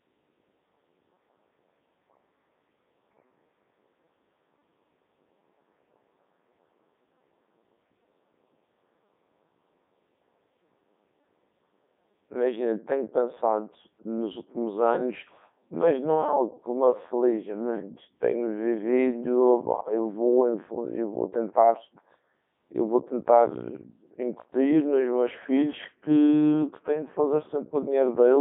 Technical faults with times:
0.00-28.41 Codec 2 vocoder

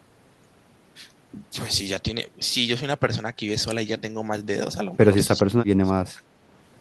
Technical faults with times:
5.34-6.26 speech suppressed in double talk

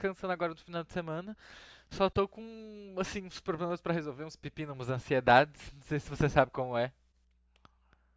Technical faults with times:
none

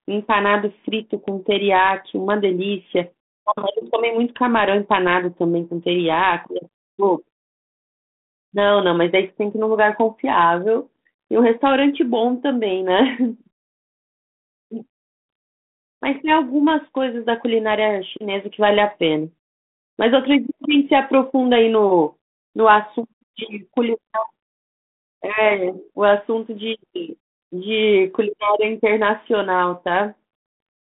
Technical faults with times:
none

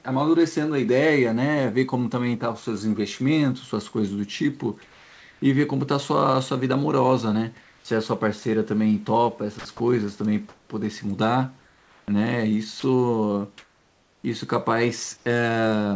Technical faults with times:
4.82-5.42 comfort noise in place of the background
7.61-7.85 comfort noise in place of the background
9.59-10.70 sound chopped by the voice detector
11.60-14.24 sound chopped by the voice detector
15.17-15.26 comfort noise in place of the background

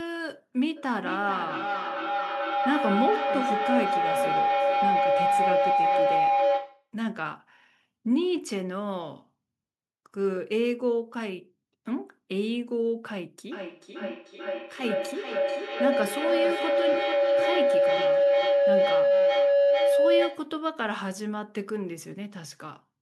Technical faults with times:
0.76-6.92 feedback howl
13.52-20.62 feedback howl

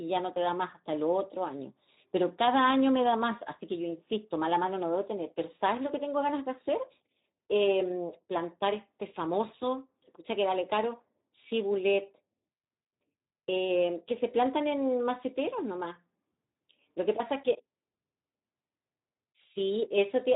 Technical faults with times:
0.00-20.36 Speex codec

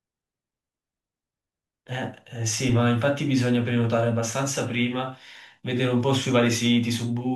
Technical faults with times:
2.69 corrupt frame decoded

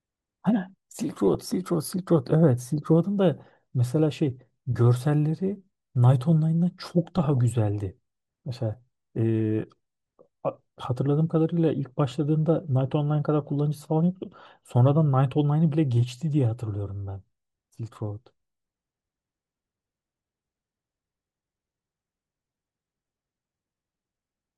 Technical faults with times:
0.00-24.57 MP2 compression
1.28-1.35 DAB burbling
7.06-7.39 DAB burbling
9.61 DAB burbling

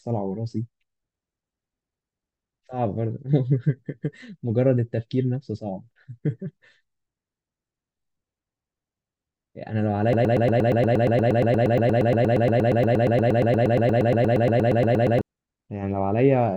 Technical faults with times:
10.13-15.21 broken-record loop

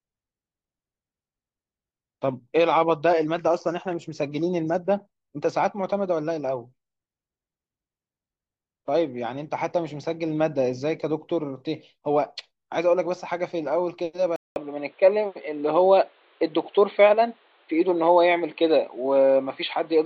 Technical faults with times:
14.36-20.06 input switched to a poorer device

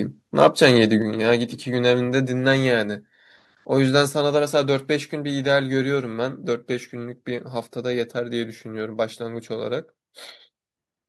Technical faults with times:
0.38-0.71 microphone overload
1.02 microphone volume stepped down
4.08 microphone volume stepped down

